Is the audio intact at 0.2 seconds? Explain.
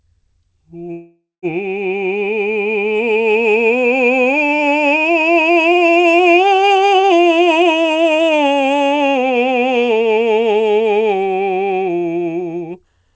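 Yes, at 0.2 seconds the music is intact, with no fault at that moment beyond the call path's normal band limit, which leaves nothing above 8 kHz.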